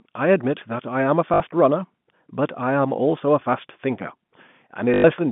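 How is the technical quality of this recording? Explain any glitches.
Two brief glitches interrupt the telephone-band speech, which passes through G.711 telephone coding and is limited to roughly 150 Hz to 3.5 kHz. Packet loss with the last packet repeated occurs from 1.34 to 1.40 s (60 ms) and from 4.94 to 5.04 s (100 ms). The receiver replayed its last received packet until fresh ones arrived. The repeats ignore pitch, and the stutter buzzes at about 50 Hz, which fits 20 ms packets.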